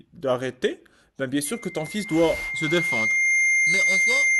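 At 1.45 s a loudspeaker feedback squeal begins: a single 2.1 kHz tone swelling over about two seconds to roughly 5 dB above the speech, lasting to the end. Unlike a steady hum or whistle, it grows by itself, because the mic-to-speaker loop exceeds unity gain there.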